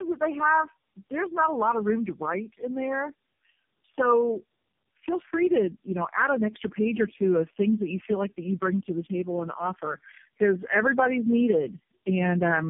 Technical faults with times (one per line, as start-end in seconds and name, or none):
0.00-12.70 tandem speech coding